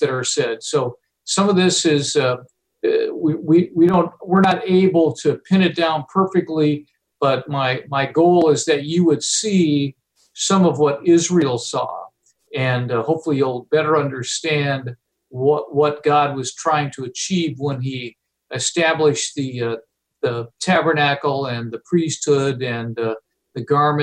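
From 3.89 to 3.94 s the sound dips abruptly by about 6 dB for 50 ms, likely one channel dropping out ahead of the mono sum.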